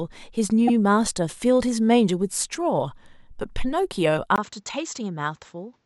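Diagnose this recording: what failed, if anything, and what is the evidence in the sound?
Repeated frames at the codec or storage stage: at 0.67 s, a 78 ms block plays twice, adding 78 ms. Unlike a dropout, nothing is lost; the stutter lengthens the audio.

At 4.36 s, after a 20 ms silence, the speech dulls to nothing above 7.7 kHz, drops about 5 dB and gains faint new background noise. This is likely an input switched to a poorer device. The new noise and level set it apart from a codec bandwidth drop.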